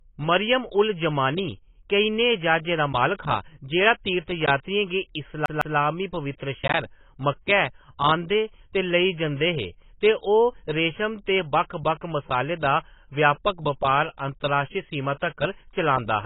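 Speech runs the full clip with a dull, smeared texture and nothing above 3.8 kHz, plus a warbling, fizzy edge on sibilants. The likely cause is heavy AAC compression, with the encoder cutting the top band and coarsely quantising the rest, consistent with an AAC-LC stream at about 16 kbps. From 5.46 to 5.77 s, a CD stuck on one turn produces a rapid, even stutter. A 0.16 s segment plays twice, with a brief mute at each jump back.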